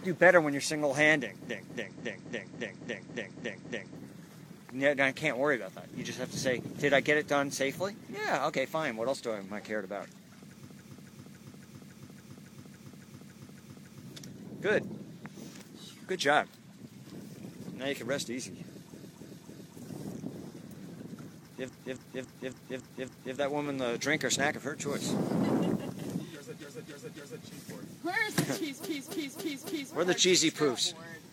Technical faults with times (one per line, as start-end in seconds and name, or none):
1.44-3.95 repeated frames
10.64-13.98 repeated frames
18.90-19.74 repeated frames
21.64-23.32 repeated frames
26.57-27.40 repeated frames
28.80-29.91 repeated frames